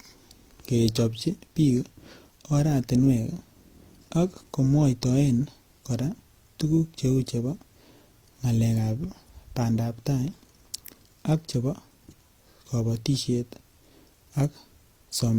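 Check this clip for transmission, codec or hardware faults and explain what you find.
One fault runs throughout the speech. Smeared, swirly codec artefacts layer over each other, pointing to transcoding between lossy codecs, likely HE-AAC then Opus at around 32 kbit/s each, the later Opus pass compounding the earlier one's damage.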